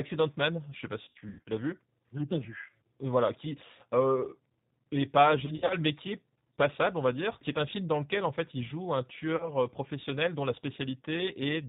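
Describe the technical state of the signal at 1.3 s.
At 1.3 s the signal is inside a stretch of VoIP packet loss concealed by the speech codec, running from 1.03 to 1.49 s between "sais pas" and "l'as vu". About 280 ms of audio is missing across that 440 ms span, with the longest gap around 100 ms. The decoder fills the holes by repeating its last pitch and filter at falling gain, so the sound is stretched into a buzzy tone or coloured noise that fades. On a spectrogram this shows as smeared, flat harmonic bands. The waveform shows decaying, repetitive cycles.

Underneath, the 8 kbit/s G.729 codec is plainly audible, with rough, synthetic speech and nothing above 4 kHz on the spectrogram.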